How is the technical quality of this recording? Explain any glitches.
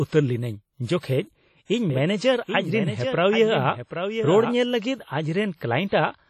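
The recording has heavy, audible damage throughout, plus two localised glitches.

WMA compression runs the whole clip. The sound is washy and ringing, with hiss that swells and fades with the speech. Nothing survives above 16.3 kHz. The damage likely comes from WMA encoding, which fits a bitrate near 32 kbps. Long transform blocks smear quantisation noise and drop weak detail.

A doubled audio track appears from 1.90 to 4.54 s. A second full-band copy trails by around 0.7 s, roughly 10 dB quieter. It has no reverb tail and starts and stops abruptly. A duplicate capture path or an edit likely holds two offset copies.

Pre-echo occurs from 5.88 to 5.92 s. A short hiss lasting 36 ms precedes an attack, which sounds softened. The codec spread noise meant for the loud onset across the whole block, filling the quiet moment before it.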